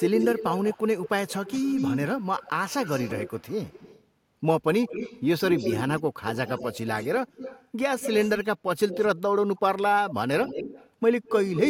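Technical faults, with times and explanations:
0.00–4.04 s, 4.87–7.67 s, 8.00–8.46 s, 8.88–9.20 s, 10.43–10.90 s and 11.24–11.68 s: echo leak. A delayed copy of the speech trails it by 193 to 211 ms. It sits about 5 to 10 dB below. One end likely plays the call on a loudspeaker, and its echo canceller passes some back.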